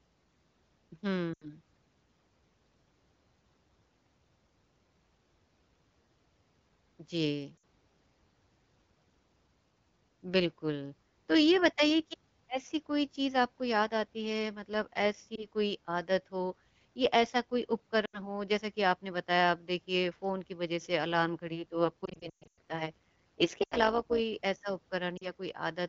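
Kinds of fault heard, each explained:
Lost AMR speech frames: the decoder stretches the last good sound with fading gain, so short gaps warble and fade rather than cutting cleanly to silence.
Overlap-add ripple: mismatched frame overlap makes the level pulse by about 11 dB at around 150 Hz from 21.47 to 24.21 s, a steady metallic buzz rather than irregular frame-loss smearing.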